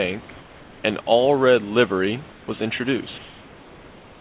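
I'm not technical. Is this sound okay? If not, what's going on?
No. In the pauses from 0.30 to 0.84 s, 2.32 to 2.48 s, and 3.18 s to the end, the background turns into a smooth, even hiss and gets a little quieter. This is comfort noise in place of the background. The call likely stopped sending sound whenever it detected no speech, and the receiving end filled each silence with artificial noise instead of the real room sound.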